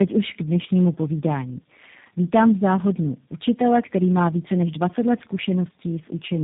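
Speech that has gone through tandem speech coding: it crossed several speech codecs in a row and was decoded and re-encoded at each hand-off. This fits low-rate G.729A coding at both ends. Each stage compounds the last, leaving the whole clip rough, warbly and muffled, with nothing above 3.8 kHz.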